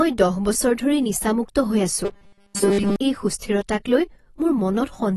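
Dull, smeared speech runs through the whole recording, with a watery, fizzy edge on sibilants and no content above 12 kHz. This is AAC compression at work, likely AAC-LC at a low bitrate, and the sound points to around 32 kbps. At that rate the encoder lowers its bandwidth cut-off and quantises the remaining frequency lines so coarsely that gaps open in the spectrum, and the damage is plainly audible. From 2.05 to 2.96 s, just after "ধৰি নিচামুক্ত হৈ", the speech collapses into a rigid metallic buzz fixed at 200 Hz. It still follows the rough shape of the phrasing. This is robotic sound from repeated short buffers. New audio was not arriving in time, so the playback path likely kept looping its last tiny chunk while the real audio was skipped. The 200 Hz buzz fits a buffer of about 5 ms repeating over and over.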